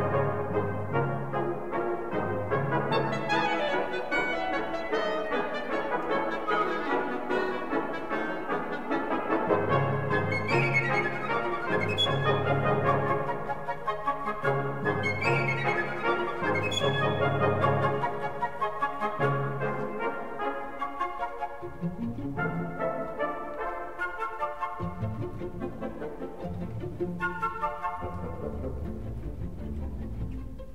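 Nothing technically wrong turns up anywhere in this audio, so there's no fault to place in time or trace back to a cause.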